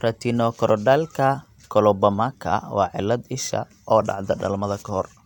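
Speech, with no technical faults to be heard.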